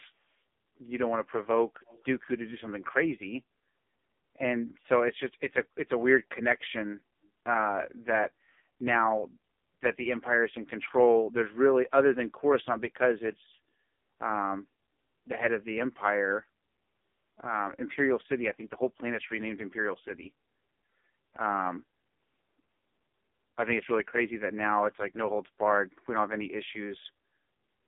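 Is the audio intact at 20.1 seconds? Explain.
No. At 20.1 s, as throughout the clip, the speech sounds buzzy, thin and synthetic, with a muffled, telephone-like quality and nothing above 3.7 kHz, heard within a line band of roughly 200 Hz to 3.6 kHz. This is the AMR narrowband mobile codec. It samples at 8 kHz and rebuilds the voice from a vocal-tract model driven by sparse pulses. The heavy damage fits the codec's low-bitrate mode of about 5 kbps.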